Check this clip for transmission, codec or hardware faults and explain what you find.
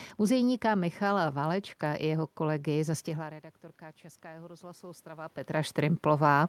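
One fault stands out: automatic gain rising from 4.21 to 5.77 s. After the input drops by about 19 dB, the gain control slowly adds about 4 dB, so speech and room noise swell together. A talker moving, as around 3 s and 5 s, changes the voice alone.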